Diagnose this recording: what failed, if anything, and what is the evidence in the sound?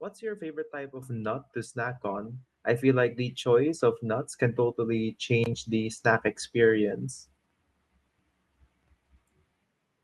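The microphone volume stepped up twice, at 1.02 s by about 8 dB and at 2.04 s by about 4 dB. Speech and background noise jump together, so call processing raised the device's input gain in single steps, not the talker moving closer.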